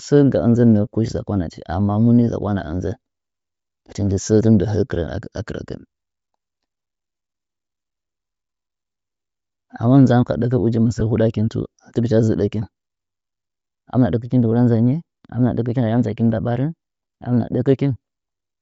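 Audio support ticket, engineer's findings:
Bluetooth LC3 compression, entire clip: speech carries a breathy, grainy edge in the upper band; codec damage plainly audible. Likely cause: LC3 at a low rate, around 32 kbps, upper spectrum zeroed and refilled with noise. Spectrogram: speckled, noise-textured high band with little harmonic structure, block timing consistent with 10 ms frames.

Lost LE Audio frames, 11.00 s: one frame of about 10 ms missing; the decoder repeated the last spectrum with randomised signs, giving a brief noisy smear in the speech. Waveform: a short patch where the envelope continues but the fine structure turns to noise. Spectrogram: a 10 ms vertical band of smeared energy, too short for any fade toward silence.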